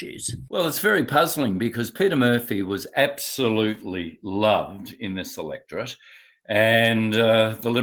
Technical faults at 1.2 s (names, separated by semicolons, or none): none